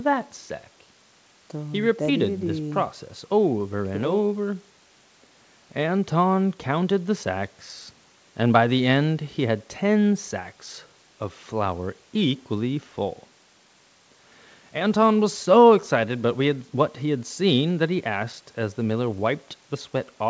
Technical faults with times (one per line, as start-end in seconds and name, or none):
none